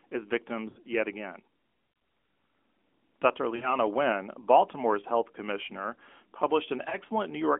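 Lost AMR speech frames show up at 0.70 to 0.79 s, just before "yet again", then at 3.56 to 3.74 s and at 6.90 to 6.97 s. Radio errors spoiled frames, so the decoder stretched the last good sound with fading gain. The first two smear and fade, and the last is just a quick dip.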